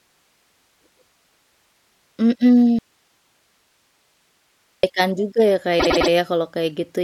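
At 2.79 s the speech cuts out abruptly, and it returns at 4.83 s just before "juga ya". For about 2.05 s only hiss remains, about 45 dB below the speech. This is an audio dropout to a faint residue, likely a signal loss while the path stayed live.

After "juga ya", from 5.79 to 6.10 s, a 104.5 ms block plays three extra times. These are repeated frames, which fits a run of about four compressed frames being resent. The result is a stutter, and the speech runs 313.5 ms longer.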